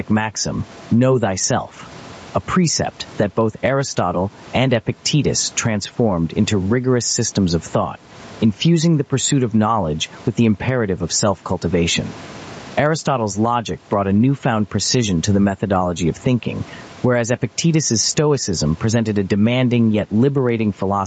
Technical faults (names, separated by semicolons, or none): gain pumping